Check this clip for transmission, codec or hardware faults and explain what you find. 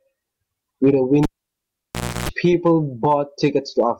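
One hardware fault: the cable was pulled and plugged in during the speech. From 1.23 to 2.29 s, a pop cuts the signal to near silence for about 1.01 s. Then 0.31 s of 60 Hz mains buzz plays while only the plug tip makes contact, and a second pop brings the sound back. That buzz, bracketed by pops, sets it apart from a clean network dropout or a steady ground-loop hum.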